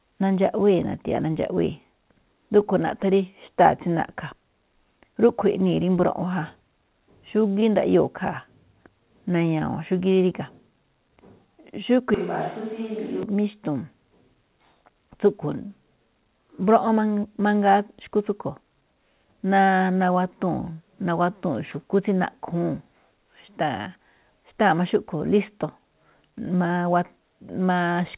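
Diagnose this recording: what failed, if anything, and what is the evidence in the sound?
Network stage: a short concealed packet loss at 7.60 to 7.64 s. Roughly 20 ms of audio never arrived in time, and the receiver covered it by extending the preceding sound, then crossfading back, so it is heard as a brief smear or wobble rather than a gap. What sets it apart from a wiring click or converter glitch is that the patch continues the surrounding pitch and texture instead of producing a sharp discontinuity or silence.

Capture stage: a switch to a distant microphone from 12.14 to 13.23 s. The sound turns abruptly roomy and hollow, drops about 10 dB, loses low end, and room noise rises to only about 25 dB below the speech. The likely cause is the close microphone's signal failing and a farther pickup taking over. Unlike a simple gain change or added reverb, the tone, level and noise floor all flip together at sharp edges, on top of the call's constant 4 kHz band limit.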